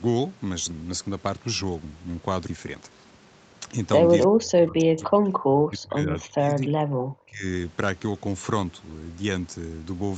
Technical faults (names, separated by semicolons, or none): skip ahead; jitter buffer speed-up; speech suppressed in double talk